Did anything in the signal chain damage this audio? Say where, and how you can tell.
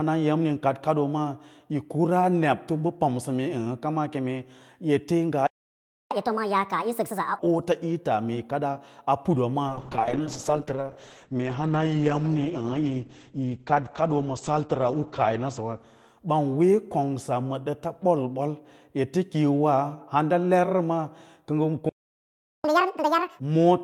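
Yes. The first fault is a playback stall, heard at 5.47 to 6.11 s and again at 21.89 to 22.64 s. The speech stops mid-flow for about 0.64 s and then about 0.75 s. On a waveform these are flat, silent gaps; on a spectrogram, blank vertical bands with no decay tail. The cause is likely the playback buffer running dry or the player thread being blocked, so the output went silent until it recovered.

Each stall is followed by catch-up at higher speed, the player draining its backlog by resampling. From 6.11 to 7.39 s the speech runs at 1.5 times speed, with pitch raised roughly seven semitones. From 22.64 to 23.39 s it runs at twice speed, roughly ten semitones higher. On a spectrogram the harmonics and formants shift visibly upward and the syllables are squeezed closer together.

The third fault is a call bitrate drop, a codec and network stage fault, from 9.69 to 17.45 s. The bandwidth estimate fell, and the encoder went from 48 kbps down to 9 kbps, staying at the lowest rate for about 5.4 s. 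At that rate Opus codes coarsely and narrows its audio band from 20 kHz to 8 kHz. The speech sounds muffled and watery. A spectrogram shows a hard ceiling at 8 kHz during the lowest-rate stretch, with smeared, blotchy detail beneath it.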